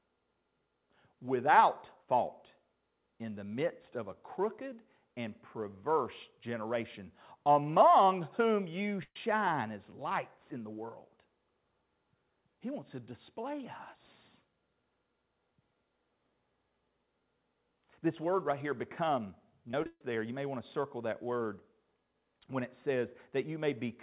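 At 9.03 to 9.28 s, right after "generation among whom you", there's a burst of packet loss. The receiver stretches the last bit of sound for about 120 ms, lets it fade into roughly 50 ms of silence, then jumps ahead to "as lights in the" with about 120 ms of speech gone.

Later, from 19.69 to 20.01 s, between "word right here become" and "there you may want", comes repeated packet loss, which gives a robotic sound. Five gaps in quick succession, the longest 140 ms, get patched by repeating what came before, so about 60% of that stretch is filler. It sounds choppy, with roughly 200 ms of speech lost. Underneath it all the call audio stops at 4 kHz, which fits a narrowband codec like G.711.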